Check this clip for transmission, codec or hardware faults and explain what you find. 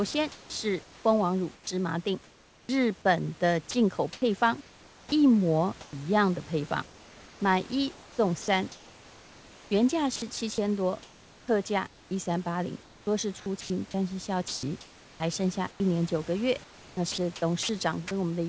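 Voice-activity gating faults run through most of this speech, over a G.722 call path with nothing above 8 kHz and room noise about 26 dB below the speech.

Sound chopped by the voice detector, from 0.11 to 2.69 s, 6.86 to 15.80 s and 16.64 to 18.11 s. The detector likely toggled transmission repeatedly, so syllables and edges vanish into comfort noise and the sound turns choppy.

Sound dropped by the voice detector, at 3.71 s. About 30 ms of quiet speech was likely misjudged as background and replaced by comfort noise, leaving a brief gap.

Comfort noise in place of the background, from 3.71 to 5.93 s. Transmission likely paused during discontinuous transmission, and the receiver substituted smooth synthetic noise for the real, textured background.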